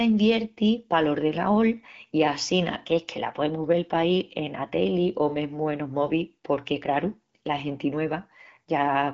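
Nothing in this speech goes wrong. It comes across as ordinary wideband phone audio, with the AMR-WB codec running at 12.65 kbit/s, only light coding wear, and nothing above about 7.3 kHz.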